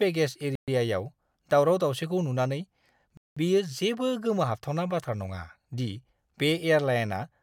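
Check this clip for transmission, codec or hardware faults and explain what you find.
Two dropouts interrupt the speech. At 0.55 to 0.68 s and 3.17 to 3.37 s, sound cuts to silence for 124 ms and 192 ms, then resumes. This is likely a Bluetooth stall: delayed packets left the playback buffer empty.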